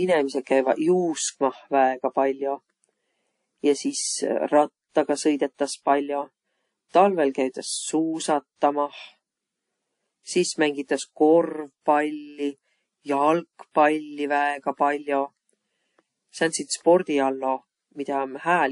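From start to finish the speech sounds dull and smeared, with nothing above about 10.6 kHz and two layers of swirly, watery artefacts heard together. This is likely transcoding between lossy codecs, which fits a low-bitrate MP3 pass re-encoded to WMA, the later codec spending bits on the earlier damage.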